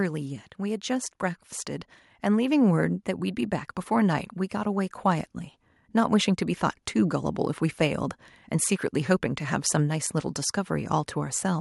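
From 2.22 s to 3.66 s, automatic gain rising sets in. The gain control judged the input too quiet and lifted its gain by about 4 dB over roughly 1.4 s. Speech and background swell together. The level creeps up rather than jumping.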